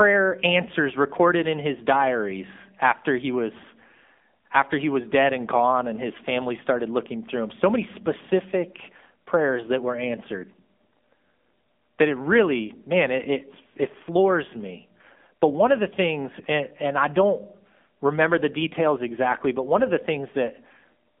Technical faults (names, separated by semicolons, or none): AMR narrowband mobile codec